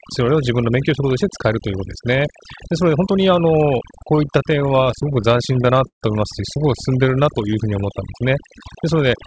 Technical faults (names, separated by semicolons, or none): overdone noise removal; repeated stalls (stutter); jitter buffer slow-down